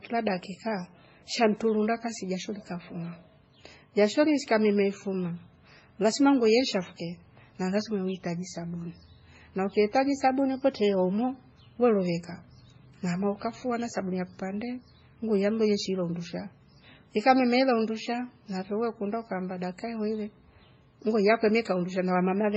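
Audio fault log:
throughout, transcoding between lossy codecs: the speech was likely encoded twice, first at a very low rate consistent with 16 kbit/s MP3 and then re-encoded in a manner consistent with WMA 1 at around 48 kbit/s. The second encoder spent its bits reproducing the first one's damage and added its own, so two distinct kinds of smearing and swirly coding noise sit together on the voice, and nothing survives above 8 kHz, leaving it dull.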